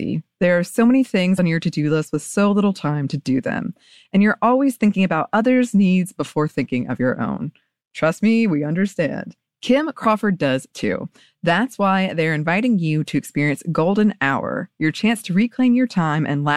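At 1.35 s, right after "are so many", the speech is broken by a short burst of damaged data in the compressed stream. It lasts until 1.39 s, about 44 ms, and the next clean audio arrives at "on your to do". Bytes in the encoded file were lost or corrupted there. The decoder misread those frames, lost its place and had to search for the next valid frame header. The result is a brief chirp, squawk, click or short hole cutting across the sound.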